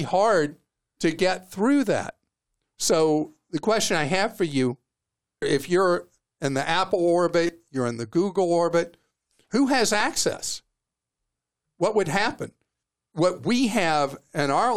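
A brief buzzy click at 7.47 s, just before "you're in the", and a single tick at 10.00 s, after "orbit who has", are repeated buffers. Audio arrived late, so one piece about 6 ms long (fitting a 256-sample buffer) replayed three times, then once, dropping roughly 20 ms and 5 ms.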